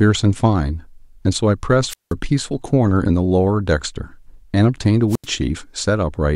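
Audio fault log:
1.88–2.13 s and 5.09–5.27 s: wireless microphone squelch dropout. Each time the FM radio link weakens, hiss swells briefly before the receiver's squelch cuts the output, leaving near silence for 180 ms and then 83 ms. That rising static before each gap distinguishes it from a digital dropout, which falls silent abruptly.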